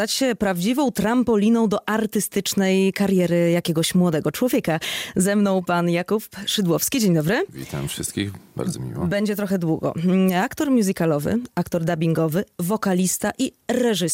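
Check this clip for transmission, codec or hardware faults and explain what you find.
No transmission, codec or hardware faults are audible anywhere in the clip.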